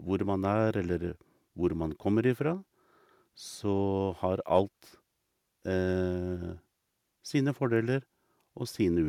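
No dropouts, clicks, distortion or timing errors turn up anywhere in the speech, and nothing in it calls for a fix.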